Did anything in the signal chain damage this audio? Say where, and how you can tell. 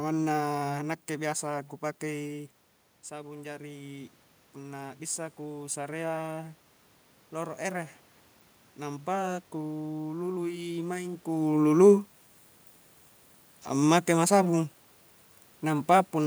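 Yes. Call processing's automatic gain rising, from 1.5 to 11.24 s after "manna nakke": level fell about 11 dB, then room noise and voice climbed together by about 9 dB, a slow upward ramp in waveform envelope and spectrogram floor.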